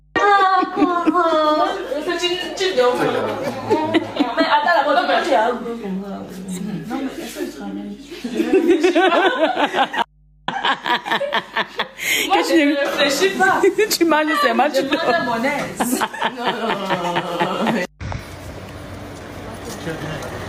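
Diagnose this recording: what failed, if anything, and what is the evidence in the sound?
What failed is gain pumping, and it runs the whole length of the clip. The level keeps swinging by something like 10 dB. Loud and soft parts sit squashed close together. This is likely the input gain set far too hot for the mic, with a fast limiter or compressor at the capture stage yanking it down on every peak and letting it back up after.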